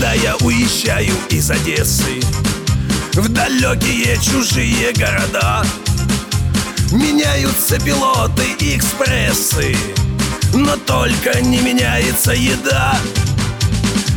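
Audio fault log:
No faults detected anywhere in the audio.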